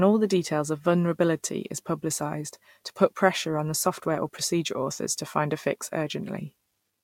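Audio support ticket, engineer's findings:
No audible faults found on review of the speech recording; no symptoms to attribute to any component.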